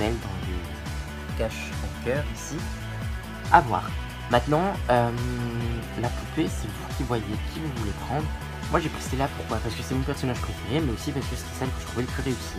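Nothing in the audio stood out as a technical problem on listening.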